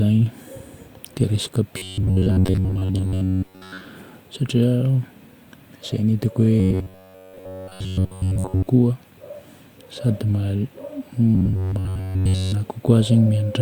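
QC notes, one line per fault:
1.77–3.86 s, robotic sound from repeated short buffers: right after "dia resaka" the speech turns into a stiff metallic buzz at 93.8 Hz. It's likely a short chunk of about 10.7 ms being looped while most of the real audio gets skipped.
6.60–8.68 s, robotic sound from repeated short buffers: the same 93.8 Hz buzz, but here pretty much everything is likely repeats, so it's the most mechanical stretch.
11.35–12.53 s, robotic sound from repeated short buffers: the same buzz again, with most of the audio likely replaced by repeats.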